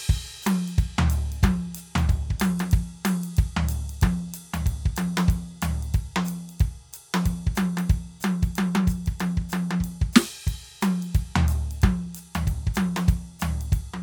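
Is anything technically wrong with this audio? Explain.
No, nothing is technically wrong with this music.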